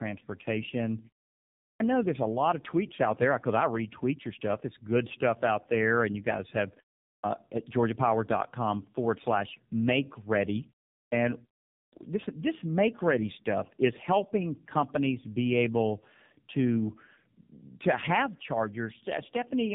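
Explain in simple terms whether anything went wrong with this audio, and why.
Tandem speech coding runs through the whole clip. The speech passed through a mobile-phone speech coder twice, unpacked and repacked between links. The second coder worked on already damaged sound, leaving the speech rough, warbly and muffled, with nothing above about 3.8 kHz.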